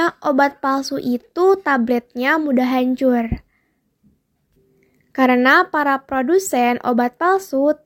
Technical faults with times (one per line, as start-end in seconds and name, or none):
none